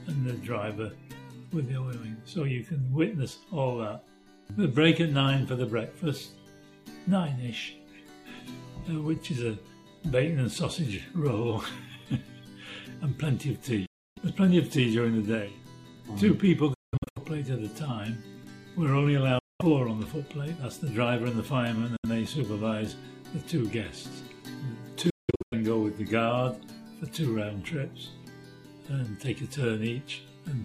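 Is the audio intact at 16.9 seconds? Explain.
No. From 16.74 to 17.18 s the sound breaks into abrupt silent gaps, most likely a Bluetooth dropout where late packets were discarded, and resumes as if it had played on. The waveform flatlines in sharp-edged holes, and the spectrogram shows blank vertical strips, the longest about 186 ms.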